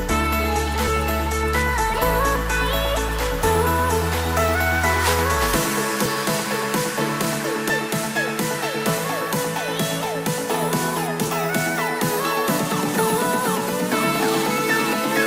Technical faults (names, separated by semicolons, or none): compressed frames skipped